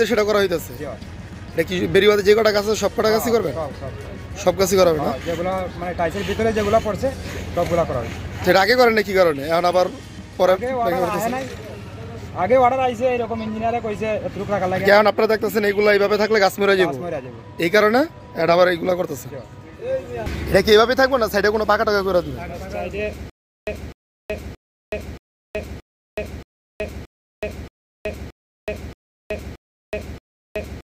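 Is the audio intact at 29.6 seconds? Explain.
No. At 29.6 s the clip sits inside a stutter with silent gaps running from 23.30 s to the end: a 0.25 s fragment replays every 0.63 s with 0.37 s of digital silence between, likely a stalled player. The waveform shows identical blocks separated by flat gaps, and the spectrogram shows blank columns.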